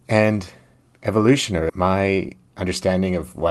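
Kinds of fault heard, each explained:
Skip ahead: Around 1.7 s roughly 0.4 s of speech is dropped, and playback jumps forward with the two sides joined almost directly.
Jitter buffer speed-up: From 1.79 to 2.81 s the receiver trims short pitch-period pieces to reduce delay, so speech runs about 8% faster at unchanged pitch.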